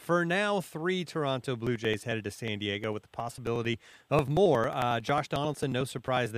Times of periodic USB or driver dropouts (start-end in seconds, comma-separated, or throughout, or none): 1.67-6.26